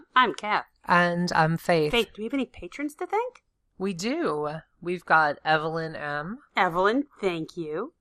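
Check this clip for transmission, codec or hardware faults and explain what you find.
Two faults are audible in the speech. Throughout, the sound is dull, with a gurgling, granular texture, most likely from MP2 compression at a low rate around 80 kbps. Starved sub-bands switch off and the rest are coarsely quantised, so a spectrogram shows flickering, blocky upper bands.

From 6.21 to 6.26 s there is DAB burbling, a brief burst of noise blips. Bit errors corrupted the MP2 audio data over seven frames, which shows as isolated bright band-limited patches.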